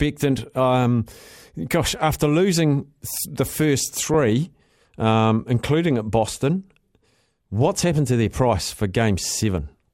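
From 4.14 to 4.29 s the speech breaks into DAB burbling. Weak reception let bit errors slip past the error correction into the MP2 audio data. Corrupted samples put short blips of noise in single sub-bands, and corrupted scale factors throw sub-bands to the wrong level for up to a frame. The span fits roughly a dozen damaged frames, with an error rate of a small fraction of a percent. It sounds like a brief burst of burbling laid over the speech.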